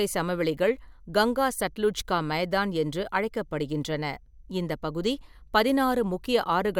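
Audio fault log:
No faults can be heard anywhere in this speech recording. There is nothing to log against any point in it.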